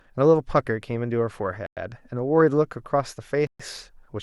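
At 1.66 s the speech cuts to silence for about 105 ms, then resumes. At 3.47 s it drops out again, for about 126 ms. Both gaps sound like a Bluetooth stall. Interference likely delayed packets, the buffer emptied, and playback waited for them.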